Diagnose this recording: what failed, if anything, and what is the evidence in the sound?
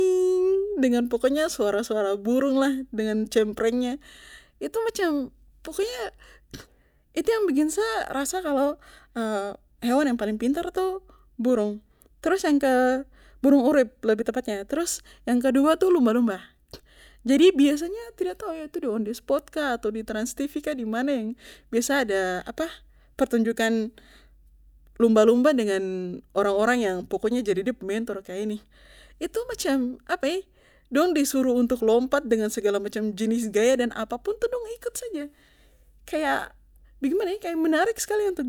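Nothing stood out on listening to this speech recording that would point to a failure at any stage.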